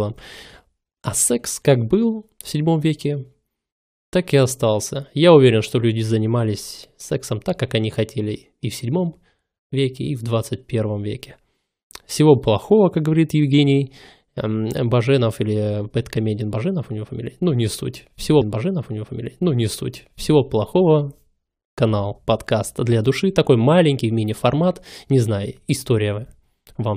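At 18.40 s there's a stream segment repeated: the player queued the same chunk twice, so about 2.0 s of speech replays, with a small blip at the jump back near 18.40 s.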